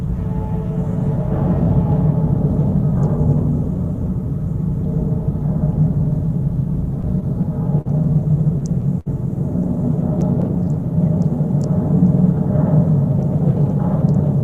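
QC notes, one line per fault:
7.01–7.87 s, repeated stalls (stutter): the sound drags and catches four times, with 73 ms held in total and the longest hold 39 ms, as late packets repeatedly emptied the jitter buffer.
9.00–9.08 s, short stall from a late packet: one sound is held about 62 ms too long before resuming where it left off, because a packet arrived late and the receiver stretched the last audio.
13.40–14.42 s, jitter buffer speed-up: the sound runs about 5% faster, hurried but at unchanged pitch, as the receiver trimmed roughly 50 ms of tiny pitch-period slices to shrink an overfull buffer.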